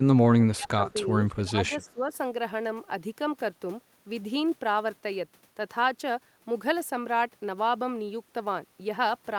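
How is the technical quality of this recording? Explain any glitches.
The quality is compromised at the very start by speech suppressed in double talk, twice in the opening two seconds. An echo canceller likely failed to tell the near talker apart from loudspeaker echo while both sides spoke, and pulled down everything it heard. From 0.0 to 1.12 s the speech sinks by as much as about 25 dB for roughly a second, and from 1.44 to 2.12 s it dips by about 20 dB for around half a second, sounding muffled and cut out in patches.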